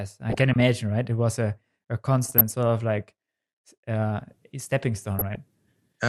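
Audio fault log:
0.30–0.62 s, 2.23–2.41 s and 5.15–5.35 s: DAB burbling. Short bursts of noise blips over the speech. Bit errors slip past error correction into the MP2 data, so wrong samples put short blips of noise in single sub-bands. The sound points to a bit error rate around 0.4 to 0.5 percent.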